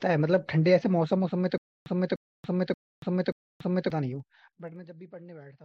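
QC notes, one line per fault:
1.58 to 3.90 s, stutter with silent gaps: a 298 ms slice of speech plays four times, each followed by about 283 ms of dead digital silence, so it repeats every 581 ms. The likely cause is a stalled stream replaying its last fragment on each retry, so the real audio there is gone.
4.08 to 4.92 s, zipper noise: the level drops by about 25 dB in 1 dB steps, at roughly 30 steps a second, with no smoothing between them. Each jump puts a tiny click in the waveform, and together they make a fast ticking that rides on the speech while the fade runs.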